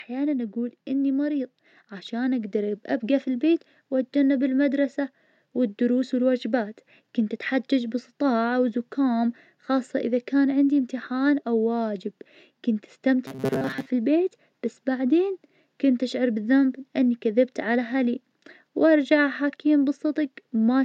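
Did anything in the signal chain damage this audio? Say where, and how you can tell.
Yes. Automatic gain rising in the call processing stage, from 0.06 to 3.54 s, ending just before "واتجنب بالمدرسة والدروس والوجبات": the level climbs by about 6 dB. The speech and background noise swell together, and a waveform envelope widens steadily while a spectrogram brightens uniformly, noise floor included.

Robotic sound from repeated short buffers, from 13.27 to 13.91 s, between "إمتحان أو واجب كنت" and "البيت بس بعدين كنت": the speech becomes a rigid metallic buzz at 133 Hz. The likely cause is a driver or buffer stage replaying a 7.5 ms chunk in place of most of the real audio. A spectrogram shows flat harmonic lines, and the waveform shows identical cycles.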